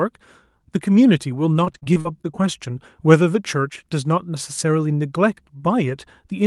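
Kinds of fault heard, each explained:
Repeated packet loss (robotic sound): from 1.53 to 2.43 s, nine short gaps, longest 39 ms, are filled by stretching prior sound, giving choppy speech with pieces missing.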